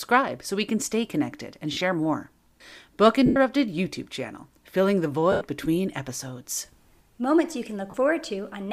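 Lost LE Audio frames break the speech at 1.73–1.81 s (scattered short gaps, the longest around 40 ms), 3.26–3.36 s, 5.32–5.41 s and 7.90–7.94 s. The decoder repeats the last spectrum with scrambled signs, giving a hissy smear that shows as blurred vertical blocks on a spectrogram and as noisy, fading patches on the waveform.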